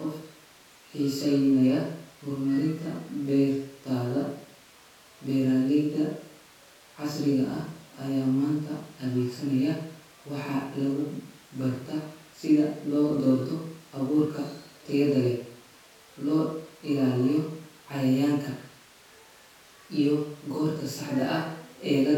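No technical faults can be heard anywhere in the speech recording. There are no events to place in time and no problems to describe.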